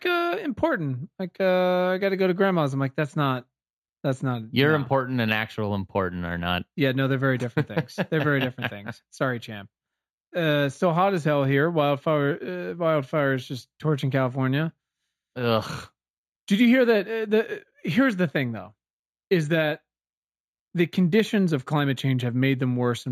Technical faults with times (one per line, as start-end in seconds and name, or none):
0.00-23.12 imaging from linear upsampling